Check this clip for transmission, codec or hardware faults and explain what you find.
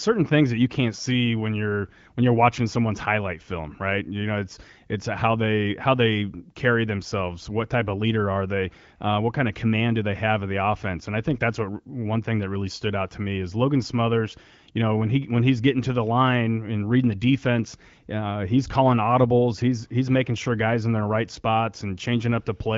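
No faults found; the speech shows only the light coding character of an AMR wideband (HD Voice) link, with nothing above 7.5 kHz, which fits a rate around 15.85 kbit/s.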